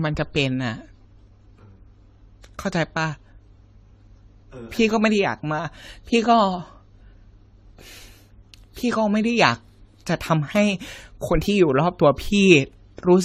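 Throughout, the speech sounds swirly, smeared and hollow, with blurred attacks and nothing above 16.2 kHz. This is likely generation loss from about seven 64 kbit/s AAC-LC passes.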